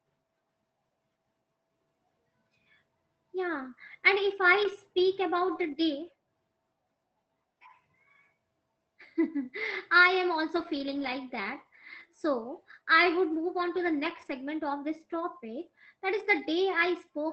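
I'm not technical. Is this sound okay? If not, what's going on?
No. The speech briefly turns rough and fuzzy at 3.55 s just before "and if", at 4.63 s just after "and if", and at 5.47, 10.55, 11.99 and 14.09 s. It happens again at 16.19 s just after "of this topic that". This is a lost packet rebuilt from error correction. Small pieces of the call went missing, and the decoder filled each gap with a rougher backup copy. That is why you hear no silence, just grittier sound lasting between 40 ms and 300 ms. The longest stretch is around 10.6 to 11.1 s.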